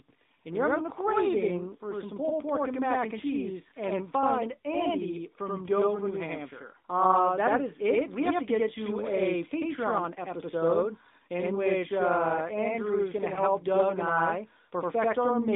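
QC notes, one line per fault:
throughout: channel delay (doubling). One channel arrives about 85 ms late, which fits a 4096-sample buffer, and the summed mono signal carries a same-level second copy. It sounds like a distinct slap or doubling rather than the closely spaced comb colouring of a short delay.
throughout: AMR narrowband mobile codec. The sound is confined to roughly 200 Hz to 3.7 kHz, with nothing above 4 kHz. It has a buzzy, synthetic quality from pulse-driven vocal tract modelling, consistent with a mid-rate mode near 10.2 kbps. This is plain bandlimiting plus coding texture, not an echo.
13.34–13.40 s: lost AMR speech frames. Right after "going to", one 20 ms frame failed. The decoder repeated the previous pitch and vocal tract settings at reduced gain, giving a brief dip or warble. Because it is a single loss, there is no drawn-out fade to silence.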